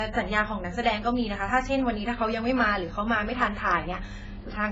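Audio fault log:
Throughout: AAC compression. The speech sounds dull and smeared, with a warbling, fizzy texture on sustained sounds and sibilants, which points to heavy AAC-LC coding at a very low rate, likely around 16 kbps. The encoder strips detail the hearing model deems least audible. On a spectrogram, energy stops abruptly at about 7.7 kHz, with patchy holes and blocky, noise-filled bands below that line.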